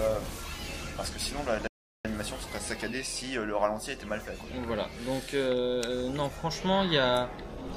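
At 1.67 s a rebuffering stall cuts the audio to silence until 2.05 s, adding about 374 ms; playback then resumes exactly where it stopped, with nothing lost.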